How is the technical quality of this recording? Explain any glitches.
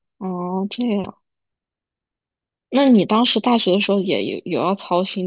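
The recording has one fault, and it runs the whole clip. Aliasing is present throughout. Energy above 4 kHz folds back into false pitches, roughly 20 dB down, which fits an unfiltered drop to an 8 kHz rate. Sibilants sound gritty and metallic.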